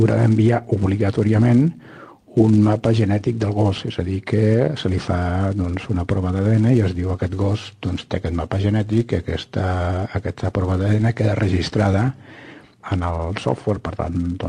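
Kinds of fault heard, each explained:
No faults can be heard in this clip. It has passed through a WebRTC call path with an Opus-style codec, and the top end stops around 12 kHz.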